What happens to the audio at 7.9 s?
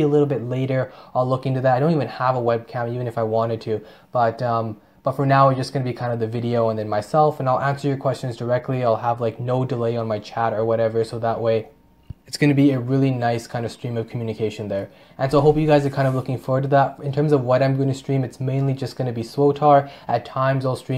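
Nothing goes wrong at 7.9 s; the audio plays through that moment intact, with no dropout, click or distortion.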